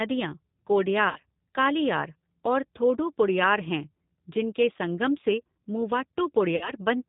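Throughout, the speech carries G.729 codec damage at about 8 kbit/s: a plainly rough, synthetic texture, with the spectrogram showing nothing above 4 kHz.

At 1.09 to 1.19 s and again at 6.56 to 6.71 s, VoIP packet loss concealed by the speech codec stretches the last sound into a fading buzzy tone or coloured noise. The waveform shows a decaying tail, and weakened energy lingers afterward.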